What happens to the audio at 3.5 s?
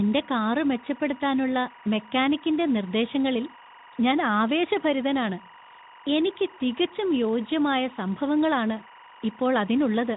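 At 3.5 s, as throughout the speech, timecode bleed from a neighbouring line adds a faint chirping warble near 1 and 2 kHz, whose 24-frames-per-second rhythm sets it apart from a steady whine.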